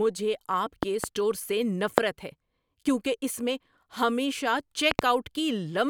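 A double loud pop at 0.83 to 1.06 s, a single one at 1.98 to 2.00 s before "ہے کیونکہ اس میں", and another pair at 4.91 to 5.01 s after "کیونکہ اس میں ہمیشہ" jump roughly 20 to 25 dB above the speech. They are likely voltage spikes from a plug, switch, static or driver glitch.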